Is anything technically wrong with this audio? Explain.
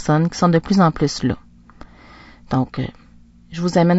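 Yes. Throughout the speech the encoding is likely low-delay AAC compression of the AAC-ELD kind. Its short frames resolve pitch harmonics poorly and starve the bit budget, which fits a bitrate near 32 kbps, so the voice sounds plainly rough and grainy, with noise between harmonics and a dulled top band.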